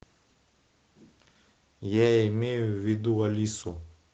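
At 2.89 to 2.95 s there's a lost packet rebuilt from error correction. About 40 ms of audio, which fits two dropped packets, was filled in from the low-bitrate copies carried in the following packets, so there's no gap. That stretch just sounds rougher and noisier than the Opus call audio around it, which tops out near 8 kHz.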